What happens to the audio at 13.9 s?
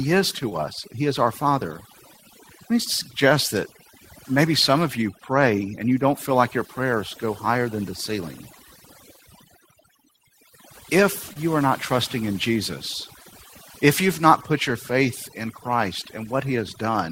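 At 13.9 s two faults are present, and both run through the whole clip rather than starting there. The first is computer activity noise: changing load on the processor, graphics card or mouse disturbs the ground shared with the audio circuit. Here it comes through as a buzzy, chirping pulse train repeating at around 1 kHz, roughly 30 dB below the speech. It follows the computer's activity, not the talker.

The second is overdone noise removal. A noise reducer set too aggressively pulls individual frequency bands down or out whenever they resemble its noise estimate, and the softer parts of the speech are stripped away with them. At this moment that leaves a lowered background, flecked with twinkling, warbling specks.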